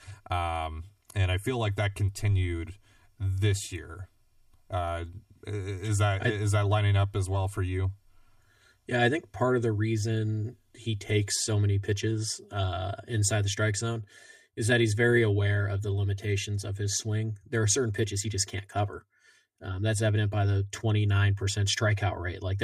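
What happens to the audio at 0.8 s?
At 0.8 s, as throughout, the speech has channel delay (comb filtering). One channel lags by around 3 ms, and summing to mono cancels evenly spaced frequencies from around 150 Hz up. It sounds hollow and phasey, but unlike a flanger the notches never sweep.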